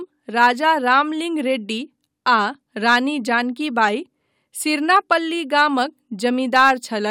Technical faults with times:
none

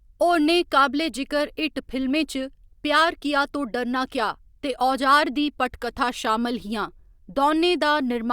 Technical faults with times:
none

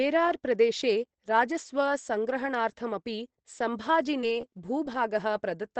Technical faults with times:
4.21-4.96 scattered short gaps

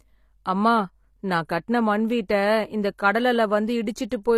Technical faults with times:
0.00-4.38 HE-AAC compression

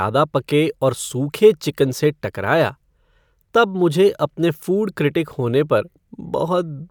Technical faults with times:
none

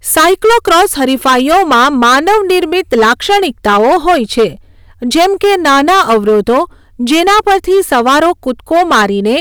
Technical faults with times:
0.00-9.41 hard clipping

